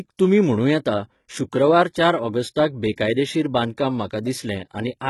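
The whole speech clip carries heavy HE-AAC compression damage. The band above about 11.8 kHz is empty. The treble below that cutoff is likely rebuilt by spectral band replication from copied lower bands, a rebuild that fits a bitrate around 16 kbps. So the s sounds come out gritty and metallic rather than simply dull, which sets this apart from plain low-pass filtering.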